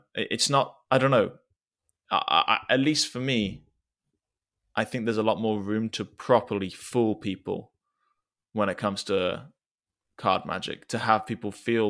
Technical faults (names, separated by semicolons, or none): none